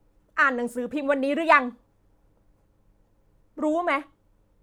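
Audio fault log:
Nothing to log here, since this bit of speech has no technical faults to flag.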